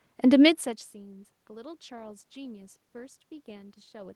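Nothing faulty in the chain: the background noise is the room itself picked up at the microphone, and the level change around half a second in is the talker shifting position.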